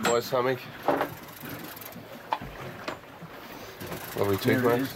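No technical faults are audible.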